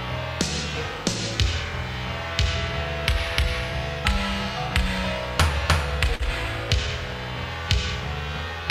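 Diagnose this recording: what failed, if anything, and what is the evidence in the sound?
A brief smear around 6.15 to 6.22 s, where the sound blurs and then settles, is short concealed packet loss in the network stage. About 40 ms never arrived in time, so the receiver extended the preceding sound for 41 ms, then blended back into the real audio.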